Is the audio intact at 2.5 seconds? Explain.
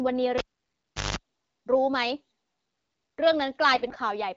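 Yes, the audio is intact at 2.5 seconds, with the speech there passing cleanly through the AMR wideband (HD Voice) codec at 12.65 kbit/s, a rate at which it stays clear.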